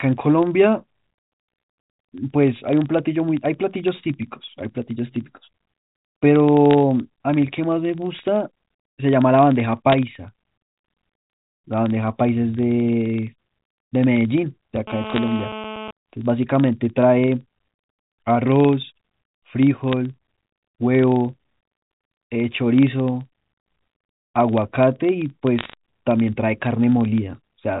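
Throughout the speech, a filter restarted on every block leaves a faint tick at the start of each block, a 23.4 Hz buzz that follows the speech level and fits a 2048-sample block. Bit errors on a digital phone line add brief sharp crackle from 6.71 to 6.74 s and from 9.92 to 9.94 s. Unlike the buzz, these are irregular isolated ticks, not a steady pattern. From 14.87 to 15.91 s, GSM phone buzz sits about 11 dB below the speech: a hard, raspy 216.7 Hz tone rich in harmonics that ignores the speech, as the audio circuit rectifies the radio bursts of a nearby phone in a call. Within that stretch, more bit-error crackle falls from 15.07 to 15.18 s. The same random ticking returns at 19.92 s and from 25.59 to 25.73 s. Through all of this, the telephone-band coding can be heard passing nothing above 4 kHz.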